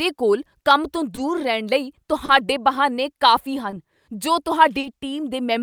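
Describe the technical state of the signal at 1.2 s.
A short stall from a late packet sits at 1.15 to 1.19 s. The buffer ran dry, so about 20 ms of sound is held and stretched before resuming, with nothing lost. Clock drift between sender and receiver also runs throughout, with the sender about 2 percent slow, causing small uneven timing hiccups as the buffer drains.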